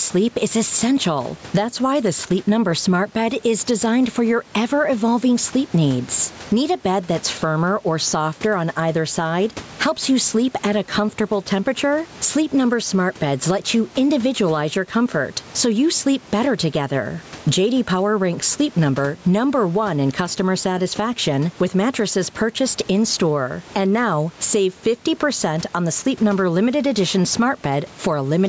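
Throughout, the gain swings around 10 dB, squashing loud and soft parts closer in level: gain pumping, likely excessive input gain driving a fast limiter.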